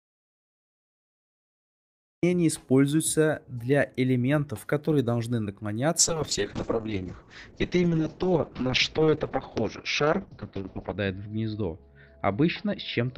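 The audio is already silent when playback begins and stays that way until 2.23 s: an audio dropout to silence. The gap is silent, with no room tone or noise floor underneath, so the input signal was lost while the recorder or encoder kept writing blank samples. The likely cause is a disconnected device, a failed link or a stray mute. Whatever occurred during those first 2.23 s was never captured.

From 5.99 s to the end there is a call bitrate drop. The call's bandwidth estimate fell, and the encoder was forced to code with far fewer bits. The coarser quantisation, which fits a fall from around 48 kbps to about 6 kbps, makes the sound rough and watery. The audio bandwidth narrows from 20 kHz to 6 kHz, which muffles the top end. The lowest setting holds for about 5 s, and quality does not recover before the end.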